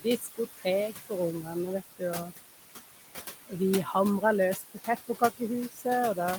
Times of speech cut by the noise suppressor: 0.00-0.39, 3.32-3.53, 4.56-4.88, 5.69-5.86

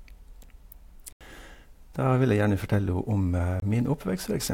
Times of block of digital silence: 1.12-1.21, 3.60-3.62

